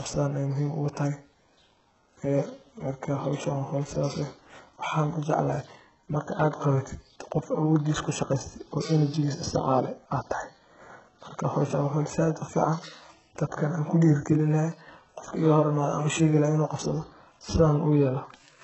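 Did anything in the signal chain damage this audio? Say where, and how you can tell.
Yes, at the codec: throughout the speech, nothing reaches above 8 kHz and heavy damage is audible, likely HE-AAC compression at a very low bitrate, around 8 kbps.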